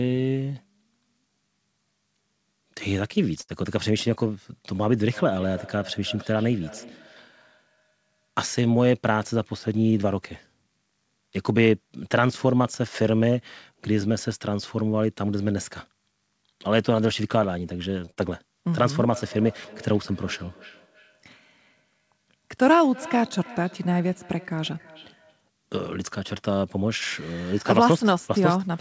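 Speech, carried over a call whose audio stops at 8 kHz. There are two short stalls from a late packet. At 3.41 to 3.51 s the sound is held for 75 ms. At 18.05 to 18.11 s it is held for 24 ms. Each time the buffer ran dry, so nothing is lost, only stretched. Right after the second stall, a burst of packet loss runs from 18.11 to 18.19 s. A 58 ms fill stands in for 60 ms of missing audio, which is skipped. Feedback echo between two devices appears from 5.13 to 8.42 s and again from 19.13 to 25.43 s. A second device in the room replays the sound into a microphone, so it returns about every 0.3 s, at about 20 to 21 dB below the speech. From 9.10 to 10.04 s, a jitter buffer speed-up plays the audio at 107% speed with unchanged pitch. About 70 ms is cut to shrink the delay, so this stretch sounds hurried.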